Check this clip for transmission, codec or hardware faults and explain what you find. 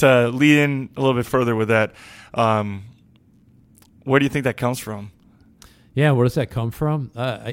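There is one fault in this speech clip. From 1.23 to 3.09 s the speech slows by 5.7% and drops 101 cents, then snaps back. This is a drift correction step, likely a clock-sync buffer adjustment.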